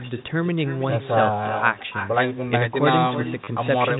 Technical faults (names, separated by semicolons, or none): echo with no canceller; packet loss with last packet repeated